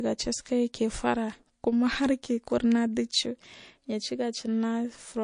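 A speech recording with plainly audible MP3 compression damage running the whole way through. Quieter detail has a watery, swirly quality as weak frequency content drops in and out from frame to frame. Sibilants come out chirpy and metallic, and consonant onsets are smeared. That level of damage fits a low bitrate somewhere around 40 kbps, most likely an encoder starved of bits.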